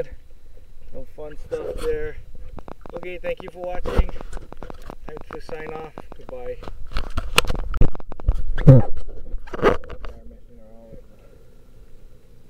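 From 2.59 to 8.73 s, a train of same-shaped clicks ticks unevenly, about 9.5 per second, likely from interference. Random crackle would vary in shape.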